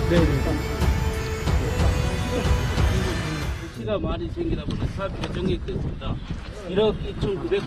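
At 4.05 s the audio switches abruptly, with no gap, to an adaptive stream at a lower bitrate: codec artefacts rise through the end, which fits a drop from 64 kbit/s to 24 kbit/s Opus.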